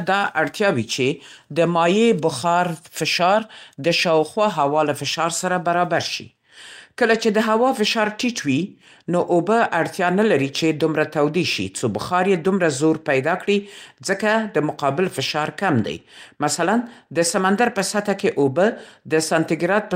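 No technical faults are audible anywhere in this speech recording.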